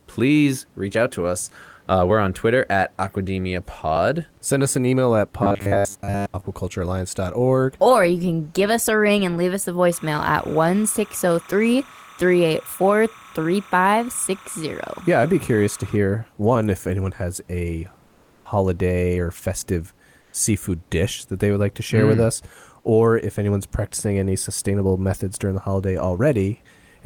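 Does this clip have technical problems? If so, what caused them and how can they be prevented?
Yes. From 5.43 to 6.46 s, just after "us an email at", the speech turns into a rigid, metallic buzz at 100 Hz: robotic sound from repeated short buffers. Audio likely arrived too seldom, so the playback side kept repeating roughly 10 ms fragments, most of the real audio being skipped. Giving the stream a larger jitter buffer and steady scheduling prevents this.

From 9.92 to 15.97 s a steady chirping warble sits well below the speech, flipping between tones near 1 kHz and 2 kHz. This is timecode bleed: a square-wave code, consistent with 29.97 fps timecode, leaking in from an adjacent track or cable. Separating and shielding timecode lines from audio lines prevents it.

Two brief stretches swap the room's textured background for a flat, featureless hiss: comfort noise in place of the background. 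The first runs 18.07 to 18.45 s, after "if anyone has a", lasting 380 ms and about 8 dB quieter. The second runs 20.21 to 20.33 s, between "or festive" and "seafood dish that they", lasting 120 ms with about 1 dB change. Discontinuous transmission, most likely Opus DTX, stopped sending audio during the pauses and synthesized noise instead. Disabling DTX on the sending encoder prevents it.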